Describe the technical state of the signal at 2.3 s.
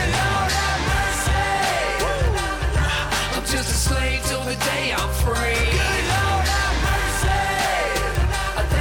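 A bit error spike sits at 2.27 s. One sample carries a flipped bit, so its value jumps by a power of two and snaps back. The peak reaches about -19 dBFS. It sounds like a single sharp, broadband tick unrelated to the surrounding sound.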